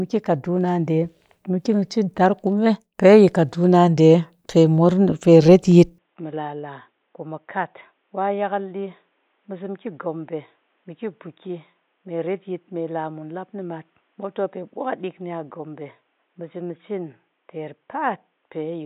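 After "pe retyit", at 5.98 s, the input likely switched to a poorer device, cutting everything above 3.8 kHz and dropping the speech roughly 10 dB, so it sounds dull.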